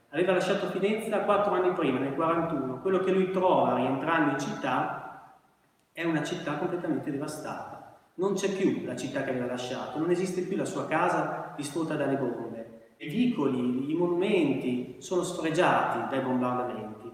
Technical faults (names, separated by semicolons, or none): none